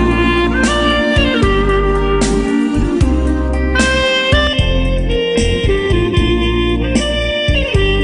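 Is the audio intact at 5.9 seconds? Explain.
No. From 4.47 s to the end, channel delay (comb filtering) is present. One channel lags the other by a fraction of a millisecond before the mono sum, so shared content cancels at evenly spaced frequencies, the first near 1.5 kHz. It sounds hollow and phasey.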